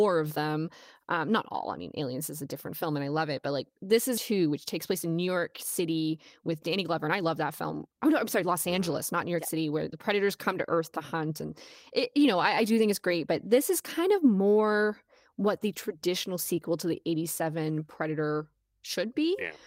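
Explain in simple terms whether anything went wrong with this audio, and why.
Skip ahead, at 4.17 to 4.19 s: about a second and a half of speech was dropped, so playback jumps forward with almost no gap.

Jitter buffer speed-up, at 4.31 to 4.54 s, 4.93 to 5.37 s, 5.79 to 10.74 s and 12.18 to 13.15 s: tiny slices were repeatedly removed to catch up, making speech run 8 to 13% faster at unchanged pitch.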